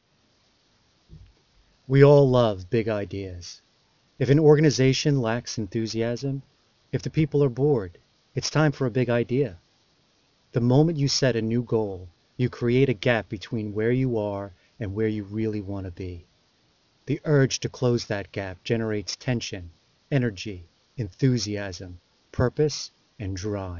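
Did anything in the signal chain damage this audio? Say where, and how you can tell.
Yes. Aliasing runs throughout, introduced at a sample-rate conversion with no anti-alias filter. The top end sounds gritty and metallic. A spectrogram shows energy pressed hard against 6 kHz, with mirrored components folding down, roughly 15 dB below the signal. This fits a drop from 48 kHz to 12 kHz.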